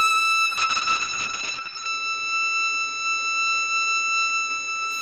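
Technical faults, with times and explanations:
0.46–4.97 s, call bitrate drop: the sound turns rough and watery and its top end narrows from 20 kHz to 8 kHz for 1.4 s at worst, fitting an encoder starved from about 48 to 7 kbps. Unlike packet loss, nothing drops out. Unlike simple filtering, the texture coarsens too.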